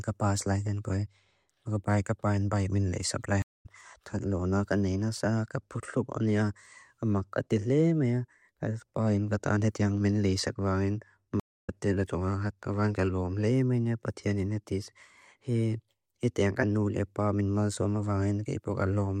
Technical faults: stream reconnect

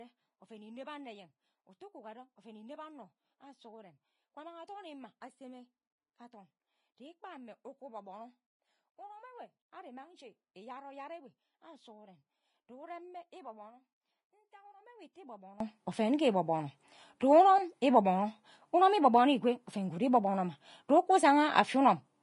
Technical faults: Vorbis compression; one channel inverted; drift correction step

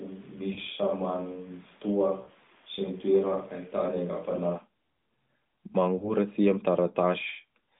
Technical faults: switch to a distant microphone; lost AMR speech frames

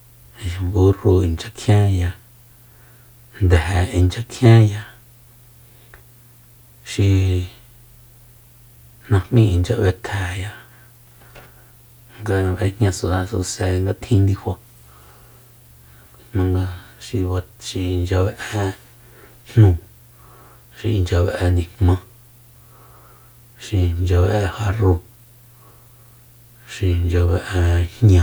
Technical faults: none

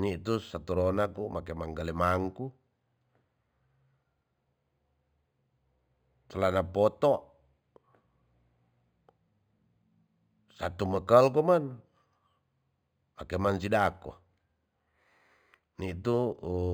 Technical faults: imaging from linear upsampling

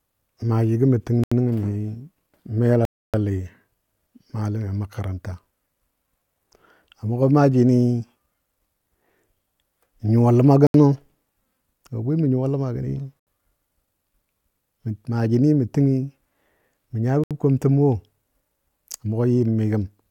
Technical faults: Bluetooth stall

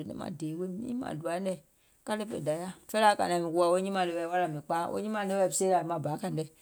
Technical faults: none

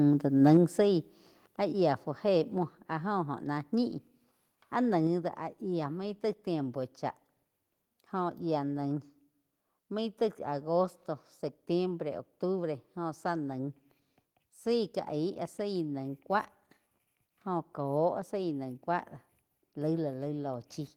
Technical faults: microphone overload; microphone volume stepped down

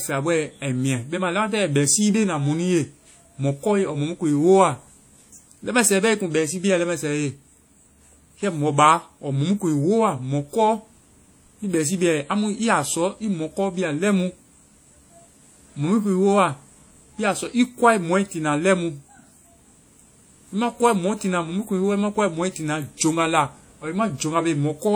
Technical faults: WMA compression

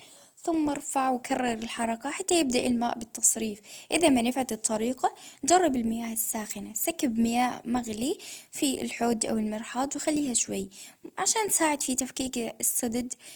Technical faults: Opus compression

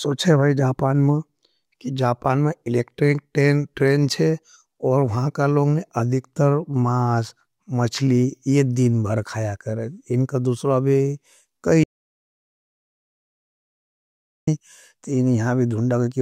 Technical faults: audio dropout to silence

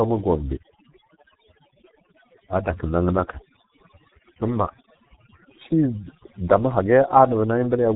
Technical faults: overdone noise removal; G.723.1 codec

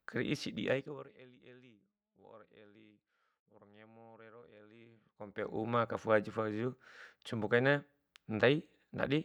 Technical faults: zipper noise

